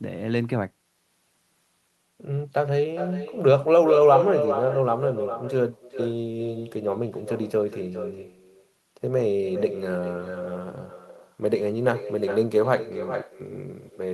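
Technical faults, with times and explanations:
Throughout, echo with no canceller: a quieter, thinner copy of the speech returns about 8 dB down, roughly 0.4 s later. The far loudspeaker feeds its microphone unchecked.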